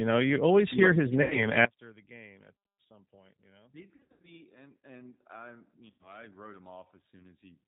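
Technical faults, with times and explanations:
Throughout, G.729 codec: 8 kbit/s speech rebuilt from filter, pitch and pulse models, plainly rough and synthetic, nothing above 4 kHz, unlike mere band-limiting.
1.22 to 1.46 s, 3.96 to 4.31 s and 5.90 to 6.13 s, VoIP packet loss concealed by the speech codec: about 80 ms, 220 ms scattered over 280 ms, and 100 ms of audio lost; the decoder stretched its last pitch and filter into fading buzzy or noisy sound, with weak recovery afterwards.
1.65 s to the end, one channel inverted: the speech drops by about 27 dB and becomes a faint residue, likely because reversed polarity cancelled the shared content in the mono sum.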